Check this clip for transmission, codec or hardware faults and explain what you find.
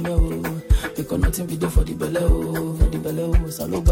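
Nothing stood out on listening that would point to a problem anywhere along the transmission, coding or playback path.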